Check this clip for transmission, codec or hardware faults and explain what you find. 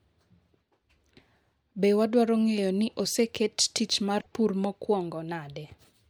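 One fault stands out in this speech clip. From 4.19 to 4.26 s, a broken MP3 bit reservoir likely garbles a few 26.1 ms frames after a cut, so the audio jumps ahead and comes out as a chirp, a burst of noise or a short hole.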